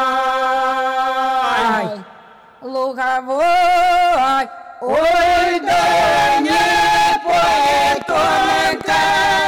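From the start the audio shows hard clipping: it is driven about 13 dB past what a stage could pass, so nearly a third of samples are flattened. The waveform shows squared-off plateaus, the spectrogram smears harmonics upward, and every loud moment sounds like harsh fuzz.

From 7.66 s to 9.40 s a train of clicks runs at a regular 13.8 per second, about thirty similar pulses standing well above the sound, likely from electrical interference or a faulty connection. They appear as evenly spaced vertical lines on the spectrogram and spikes on the waveform, heard as steady ticking.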